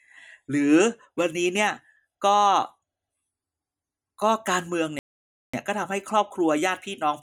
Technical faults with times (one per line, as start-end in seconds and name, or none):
4.99-5.54 playback stall